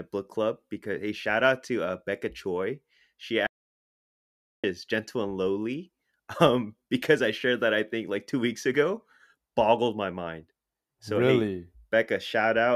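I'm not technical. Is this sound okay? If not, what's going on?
No. At 3.47 seconds the speech cuts out to dead silence, with no background sound at all, and comes back at 4.64, so about 1.2 seconds is missing. This is an audio dropout to silence, likely from the input briefly disconnecting or muting while recording continued.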